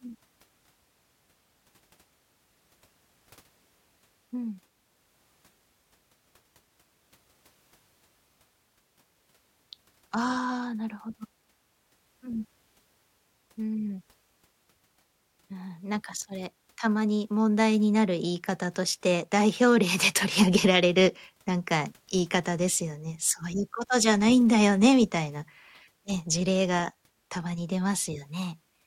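Nothing here trips the ear at all, with no technical fault turning up anywhere in the recording.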